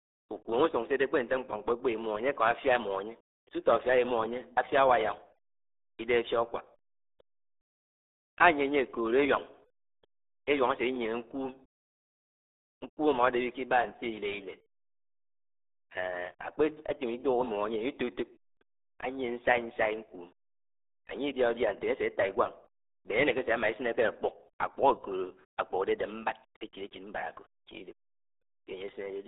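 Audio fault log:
throughout RealAudio 14.4 codec. The speech sounds muffled and gargly, with heavy coding damage. Nothing passes above 3.8 kHz, and the band sits between 300 Hz and 3.7 kHz. This narrow, coarse sound fits an 8 kbit/s codec built for dial-up modems.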